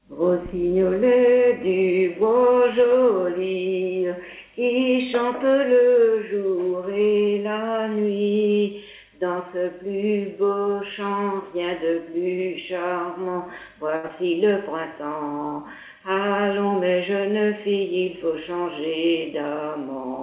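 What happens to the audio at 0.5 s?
Nothing goes wrong at 0.5 s: the audio there is intact, carrying only the narrowband character of the call path, with nothing above 4 kHz.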